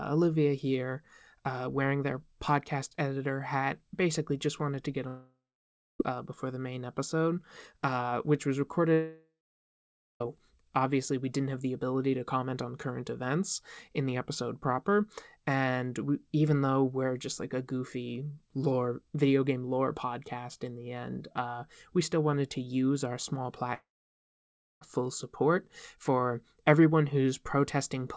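Long network dropouts at 5.08 to 6.01 s (after "just wanted to get"), 8.93 to 10.22 s (after "episode uh which was") and 23.74 to 24.83 s (before "full support for everyone"), likely from packets never arriving. Each starts as a fading buzz or hiss, then holds near-silence for 0.6 to 1 s. Unlike a short packet-loss glitch, the missing sound is simply skipped over the G.722 call path.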